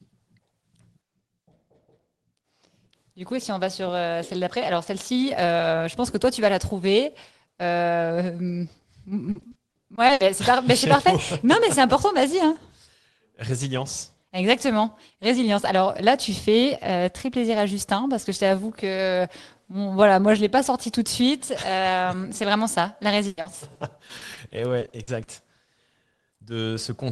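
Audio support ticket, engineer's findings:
Repeated packet loss (robotic sound), 9.31–10.21 s: choppy, robotic stretch. Seven holes, longest 60 ms, about 240 ms patched in total, so roughly a quarter of that span is concealment. Jitter buffer/network side: decoder keeps extending the last sound over each missing chunk, and the holes come too close together to recover.

Same thing again, 23.27–25.29 s, right after "c'est vraiment ça la": twelve holes, longest 100 ms, about 420 ms filled, around a fifth of the span. Same mechanism, same component.

Short concealed packet loss, 25.65–25.69 s: brief smear/wobble, 20 ms missing. Single dropout just after the second burst, probably the tail of the same network trouble. Receiver bridged it by carrying the previous sound forward, then crossfaded back into real audio. The call path itself tops out around 12 kHz, which points to Opus at a modest bitrate.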